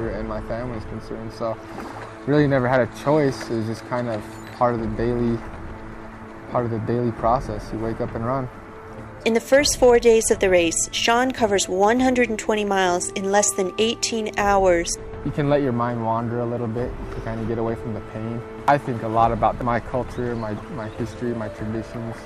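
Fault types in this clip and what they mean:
hard clipping: peaks about 1 to 3 dB past what a stage can pass are cut flat, adding brief crackle at five loud moments.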